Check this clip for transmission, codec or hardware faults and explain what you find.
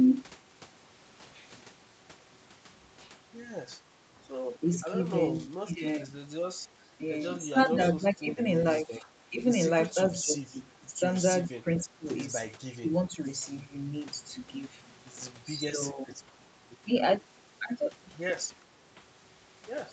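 The speech repeatedly sinks in level in short stretches through the middle of the clip, which points to speech suppressed in double talk. Nothing above 8 kHz reaches you, the call-band ceiling the call path sets.

The dips land at 5.34–6.15 s, 6.92–7.01 s, 7.52–8.42 s, 8.78–9.40 s, 9.91–10.92 s, 11.49–12.07 s, 12.78–13.26 s and 15.71–16.23 s. The deepest, around the first one, drops roughly 20 dB, while the others sit closer to 10 or 15 dB. The likely cause is an echo canceller that, with both ends talking, couldn't tell the near talker from loudspeaker echo and clamped down on everything.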